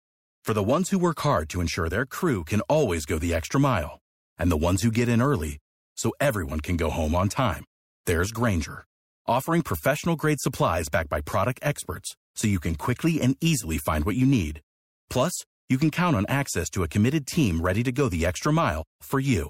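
A short hiss lands at 8.05 s in this speech clip, rising about 17 dB just ahead of a sharp attack, which sounds smeared. That is pre-echo: the codec spread coarse quantisation noise across a transform block of roughly 26 ms, apparently without switching to short blocks.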